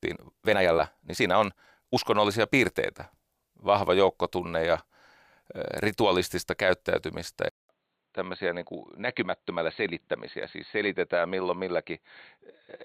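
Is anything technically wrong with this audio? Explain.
Yes, there are two problems.

From the start to 1.98 s, the speech runs hurried, about 1.51 times normal pace, yet the pitch of the voice stays natural. Then the pace drops back abruptly. This is likely a time-stretched section. Software squeezed that opening to fit a shorter length and held the pitch steady by discarding small slices of the waveform, which is what gives it that rushed texture.

Right after "ritualistista käyttäytymistä", at 7.49 s, there's a 200 ms gap. After it, the sound stays dull and boxy to the end, with a narrower band, a level roughly 5 dB lower, and a faint new hiss far beneath the speech. The likely cause is an input switched to a poorer device mid-recording: a narrower-band microphone or headset path took over, bringing its own limited bandwidth, gain and noise floor.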